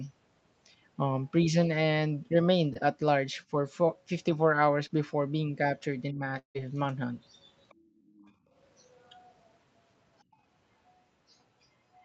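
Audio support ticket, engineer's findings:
Short concealed packet loss, 2.73–2.77 s and 4.87–4.91 s. Brief smear or wobble in the speech. About 20 ms of audio arrived too late each time. The decoder continued the preceding sound to fill the gap, then crossfaded back.

Speech suppressed in double talk, 6.12–6.22 s. Talker drops by roughly 15 dB for about a tenth of a second. Likely cause: the echo canceller mistook near-end speech for loudspeaker echo while both sides spoke, and attenuated both.

Long network dropout, 6.39–6.57 s. Sound trails off into a fading buzz or hiss, then about 100 ms of silence. Resumes with 160 ms missing. Likely a network gap. The concealment extended the last sound until it gave out, and the lost audio was never played.

Other side's voice leaking through, 7.69–7.74, 8.06–8.32, 8.95–9.33 and 10.32–10.36 s. Faint second voice, some 30 to 40 dB under the talker. 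Likely residual far-end echo from the loudspeaker that the echo canceller left in the microphone signal.

Background gated by the echo canceller, 7.74–8.06 s and 8.33–8.52 s. Room sound dips about 19 dB, then about 13 dB. The canceller clamped the microphone during loudspeaker playback, then released it, and ambience returned.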